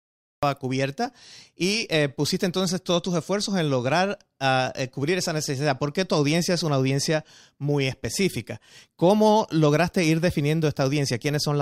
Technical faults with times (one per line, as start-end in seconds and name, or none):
0.00-0.43 cut-off start